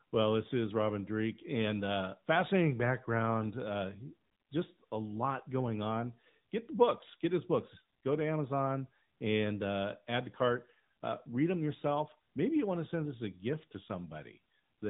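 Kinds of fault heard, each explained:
AMR narrowband mobile codec: the speech has passed through the AMR-NB mobile speech coder at a rate that sounds like 10.2 kbps. Nothing survives above 4 kHz, so the voice is muffled and audibly buzzy and synthetic. On a spectrogram, energy stops at a hard ceiling near 4 kHz throughout.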